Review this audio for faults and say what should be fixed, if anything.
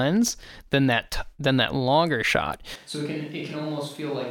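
At 2.76 s, right after "than that longer shot", the sound turns roomy and hollow. The change is sudden and lasts to the end. Bass thins out. Level drops by about 10 dB. Background noise sits only about 30 dB below the speech. This is likely a switch to a distant microphone, with the close mic's signal lost. Replace that section with close-mic audio if it exists. To prevent this, monitor the close mic throughout and record a backup feed.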